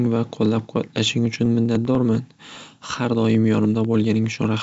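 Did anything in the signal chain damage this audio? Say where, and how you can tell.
Yes, at the driver or buffer stage: periodic USB or driver dropouts. From 0.06 s to 4.54 s there's a small tick about every 99.5 ms, roughly fifty of them, and they only show up while the speech is sounding. Each one is a tiny gap of around half a millisecond where samples were simply skipped. Something keeps stalling the USB bus or the audio driver on a fixed schedule. The G.722 band limit, with nothing above about 7.7 kHz, is a separate thing, and it isn't what's making these ticks.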